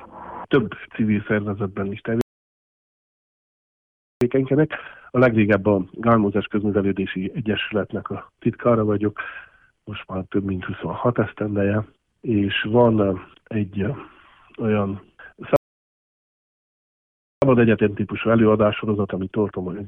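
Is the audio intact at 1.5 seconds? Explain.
Yes, the audio at 1.5 s is intact, with no dropout, click, distortion or other fault at that point.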